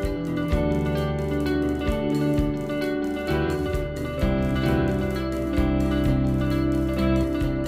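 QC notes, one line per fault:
Throughout: doubled audio track. A dry, full-band copy trails about 1.5 s behind at roughly equal level. Likely a slower second capture path or an edit holding two copies.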